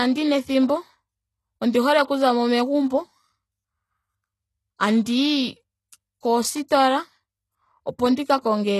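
Throughout, s sounds turn gritty and lispy with nothing above 12.3 kHz, likely HE-AAC compression copying lower bands upward, fitting a rate near 16 kbps.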